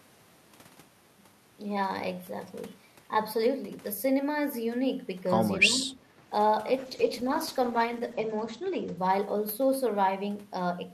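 Call bitrate drop, 6.78 to 10.05 s: speech turns coarse and muffled, highs cut at 8 kHz, consistent with encoding falling from 64 to 12 kbps.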